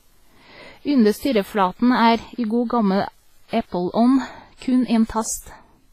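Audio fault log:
Throughout: WMA compression. The speech has heavy codec damage, with ringing, washy smearing and a hiss that swells and fades with the signal. Nothing comes through above 15.3 kHz. This is likely a transform codec at a low bitrate, somewhere around 24 kbps, spreading quantisation noise over long blocks and dropping weak components.
0.00 to 4.13 s: unreliable data bit. A steady crackly fizz sits on the audio and keeps going through the pauses, then stops at 4.13 s. One marginal data line flips its bit in a random share of samples, so every error is a spike of identical size.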